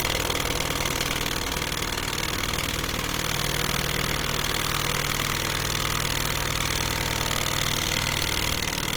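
A recording of sounds carries plainly audible Opus compression throughout: tones come out grainy, rough and noisy rather than swirling with the hollow gaps typical of MP3, while content still reaches about 20.2 kHz. That points to the music mode at around 24 kbps, the likely cause. From 3.25 s to 8.53 s a doubled audio track appears, probably from a second, slower capture path. A full-band copy about 5 dB quieter trails by roughly a tenth of a second. Unlike an echo or reverb, it has no decay or room colour and cuts in and out abruptly.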